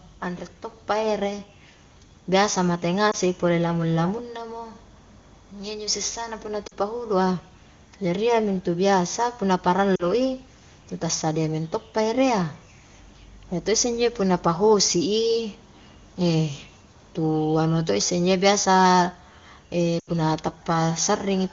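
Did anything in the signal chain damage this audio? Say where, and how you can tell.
Yes, at the network stage, as lost AMR speech frames on a wideband HD Voice call. Brief concealment glitches appear at 3.11–3.15 s, 6.68–6.73 s, 9.95–10.05 s and 19.99–20.10 s. The single-frame loss at 3.11 s is a short dip or warble, and the longer runs, the longest near 20.0 s, drop to near silence before the voice comes back weak or rough. That's the decoder replaying the last good parameters at falling gain after radio errors killed roughly one to four 20 ms frames.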